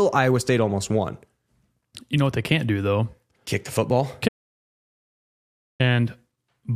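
An audio dropout to silence runs from 4.29 to 5.80 s, right after "the football": the speech cuts off mid-flow and about 1.5 s of silence follows, with no room tone. The input was likely lost while recording continued, so that stretch is gone.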